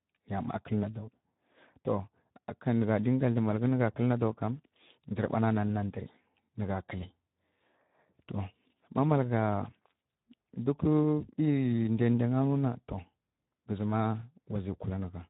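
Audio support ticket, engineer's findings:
Speex codec artefacts throughout: hoarse, noisy texture with grainy voicing. Low-bitrate CELP encoding, excitation starved of bits; damage level fits a setting around 11 kbps. Component: encoder quality setting in the VoIP/chat path.

VoIP packet loss concealed by the speech codec, 11.36–11.39 s: brief smeared blip with fading level. Decoder extrapolating last pitch and filter over about 20 ms of missing audio, which fits a single lost frame, then recovering. Component: network transport/jitter buffer.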